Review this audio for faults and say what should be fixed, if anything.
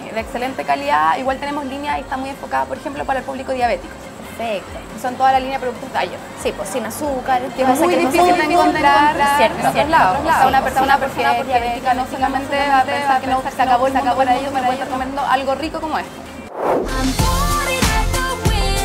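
From 7.58 to 15.02 s a second copy of the sound trails the original by roughly 0.4 s, a few dB quieter, with no reverb tail, starting and stopping abruptly: a doubled audio track, likely from the signal being captured again through a slower path. Route each source to the mix only once.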